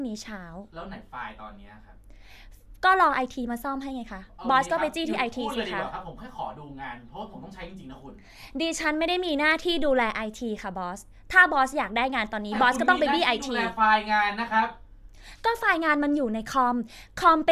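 No technical faults are audible.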